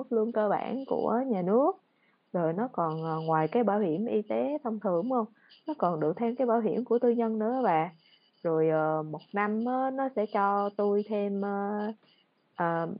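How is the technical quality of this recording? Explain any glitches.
No glitches; room noise sits about 42 dB below speech.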